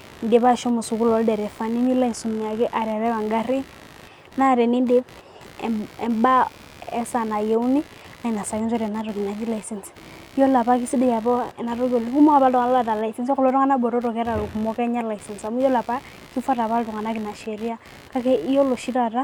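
A speech recording with computer activity noise throughout. A faint buzz pulses at around 70 Hz, roughly 25 dB below the voice. It tracks the computer's workload through the shared ground, not the speech.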